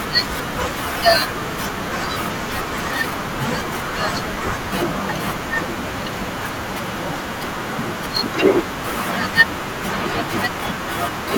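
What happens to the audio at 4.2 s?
Compressed frames are skipped from 4.10 to 4.18 s: the decoder loses about 70 ms of speech, jumping ahead.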